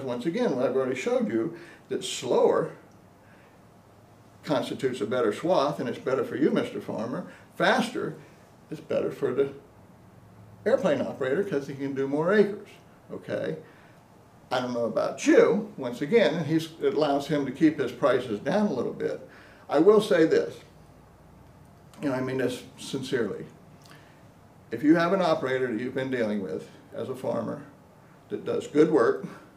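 Nothing stood out as a technical problem on listening to this audio.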